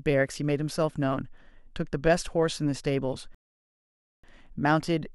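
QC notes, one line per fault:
3.35–4.24 s, rebuffering stall: the player ran through its downloaded audio and halted until more data arrived, dropping 0.89 s of silence into the speech; playback then resumes at the exact point it stopped, so nothing is skipped, only time added.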